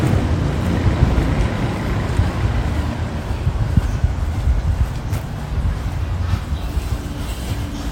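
No technical faults are audible anywhere in the audio.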